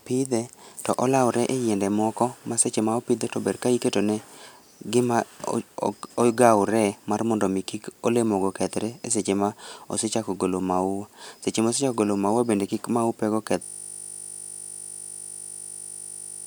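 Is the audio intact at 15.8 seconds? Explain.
No. A system hang loop runs from 13.63 s to the end of the clip: playback froze while the hardware kept replaying one 20 ms slice of its buffer, so the speech gives way to a steady 50 Hz buzz repeating about 140 times.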